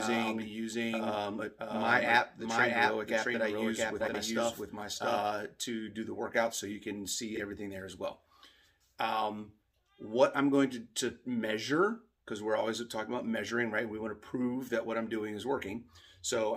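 From the first moment until 5.18 s, a doubled audio track is heard. A second full-band copy trails about 0.7 s behind, at roughly equal level. It has no decay or room colour. It likely comes from a slower second capture path. It stops abruptly at 5.18 s.

At 4.00 to 4.15 s, inside the doubled stretch, frames out of order garble the sound. Two adjacent blocks of about 70 ms play swapped. This fits runs of three frames each. At 7.35 to 7.40 s the same fault recurs more briefly. Two single blocks of about 23 ms trade places, with a short flutter. No time is lost either time.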